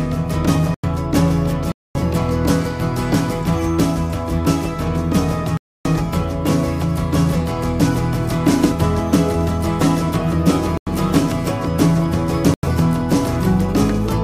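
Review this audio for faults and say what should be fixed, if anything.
Five blocks of digital silence cut into the sound: at 0.74 to 0.84 s, 1.72 to 1.95 s, 5.57 to 5.85 s, 10.77 to 10.87 s and 12.54 to 12.63 s. The three 93 ms holes match a 4096-sample buffer, and the 231 ms and 279 ms holes span several buffers. Each gap starts and ends abruptly. On a waveform they appear as flat lines. On a spectrogram they are dark vertical bands. Fix this by giving the audio thread enough buffer headroom and priority that it never misses a deadline.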